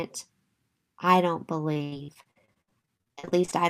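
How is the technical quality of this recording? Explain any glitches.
The recording is marred by one sustained fault. Repeated packet loss (robotic sound) runs from 1.73 to 3.53 s, starting right after "I don't". Around two dozen packets went missing or arrived too late, and each hole was patched by stretching the preceding sound. Gaps reach 83 ms, and about 0.68 s of the 1.8 s stretch, roughly 38 percent, is filler. The speech turns choppy, with fragments missing.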